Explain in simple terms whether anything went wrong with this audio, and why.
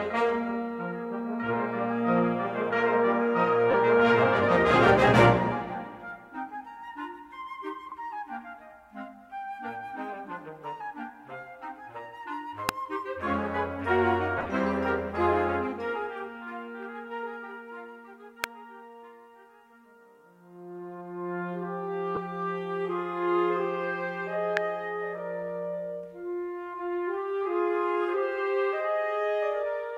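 Lost LE Audio frames occur at 3.71–3.74 s, 7.90–7.92 s, 14.38–14.46 s and 22.15–22.17 s. Short pieces of the Bluetooth signal, about 15 to 45 ms each, went missing. The decoder filled each gap by repeating the last bit of sound with scrambled detail, which you hear as a brief, noisy smear.

Electrical switching spikes are heard at 12.69 s, 18.44 s and 24.57 s. Each is a sharp, instant snap sitting on top of the sound. The likely cause is a nearby switch, motor or static discharge sparking, and the audio wiring picking up that tiny burst of electrical interference.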